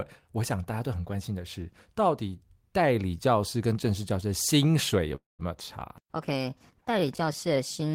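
This speech clip has two call faults. From 5.15 to 5.41 s there is a call audio freeze. The last sound is carried on and then falls silent for about 160 ms. Speech then resumes where it stopped. About 0.23 s of delay is added, and nothing is lost. The likely cause is delayed packets leaving the jitter buffer empty. At 5.98 s a call bitrate drop begins and lasts to the end. The speech becomes more coarsely coded. This fits the encoder being pushed from about 32 kbps down to 15 kbps after the bandwidth estimate fell. It does not recover before the clip ends.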